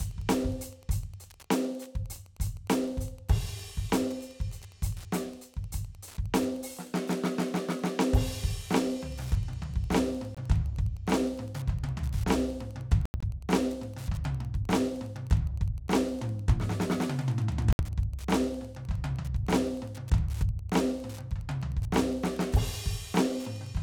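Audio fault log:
Throughout: Wi-Fi interference, steady ticking every 102.4 ms at roughly 30 dB below the music, from a nearby radio's beacon being rectified in the audio circuit.
10.35 to 17.81 s: Bluetooth dropout, silences at 10.35 s (21 ms), 13.06 to 13.24 s (broken gaps, longest 85 ms) and 17.73 s (64 ms). The likely cause is late packets being discarded, and the music resumes further on, as if it kept playing.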